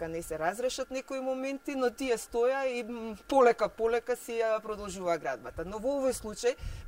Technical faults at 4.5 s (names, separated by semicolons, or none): none